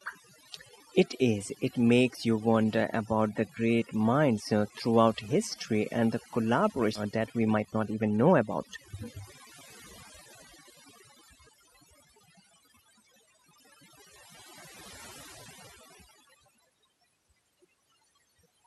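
Overdone noise removal runs through the whole of this speech recording. A noise reduction stage set far too aggressively drives individual frequency bands down or off whenever they sit close to its noise estimate, so the pauses collapse into near silence sprinkled with twinkling specks, and the quieter parts of the voice are pulled down along with the noise. A skip ahead occurs at 6.95 s. Roughly 0.7 s of audio never plays, and the sound on either side is butted together with no gap or fill, a sign that a stretch was discarded while later audio was already queued, cutting the playback delay by about the same amount. Jitter buffer speed-up follows from 7.05 to 9.34 s. The receiver still held more audio than its target, so it repeatedly trimmed short pieces of one or a few pitch periods, taking out around 0.3 s in total. The speech runs at about 111% of normal speed with its pitch unchanged, giving that stretch a hurried feel. 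Underneath it all is the coding texture of an Opus call path at about 64 kbps, with a high-frequency limit near 12 kHz.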